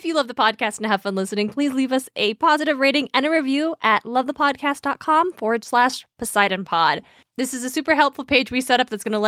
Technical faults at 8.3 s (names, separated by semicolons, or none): clock drift between sender and receiver; repeated timing corrections